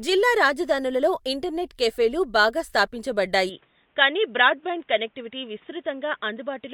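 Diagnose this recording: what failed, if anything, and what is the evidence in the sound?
At 3.49 s the speech abruptly turns duller and narrower, with nothing above 3.8 kHz, drops roughly 5 dB, and gains a new noise floor about 40 dB down, with no gap. This is likely an input switched to a poorer device, not a codec bandwidth drop, since the level and noise change too.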